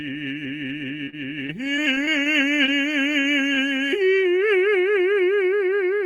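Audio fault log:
0.67–2.27 s, repeated packet loss (robotic sound): Nine separate dropouts occur over this stretch of music, the longest about 36 ms, with roughly 160 ms of material lost in total. Each hole is bridged by extending the preceding sound, and about 11% of the span is synthetic fill. Because the gaps arrive in quick succession, the patches never settle, so the passage sounds choppy, with fragments of the music missing.
1.57–2.56 s, jitter buffer slow-down: Overlapping the end of the loss run, the receiver inserts about 57 ms of repeated material to rebuild its reserve. Playback drops to roughly 95% speed while the pitch stays put. Short cycles are duplicated back to back, so sustained sounds are drawn out and the timing drags slightly through this second.
2.66–2.70 s, short concealed packet loss: About 20 ms of audio never arrives in time. The gap is filled by continuing the previous sound and then cross-fading into the real signal, which leaves a brief smear or wobble. 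Any short transient that fell inside that window is gone rather than delayed.
3.22–3.26 s and 3.54–3.59 s, short stall from a late packet: In each case a packet arrives late and the buffer runs dry. The last sound is held for about 29 ms and then about 22 ms until the data arrives. Playback then resumes from the same point, so nothing is lost, but a sound lingers too long with a faint buzz or dip, and the timing shifts later by the length of each hold.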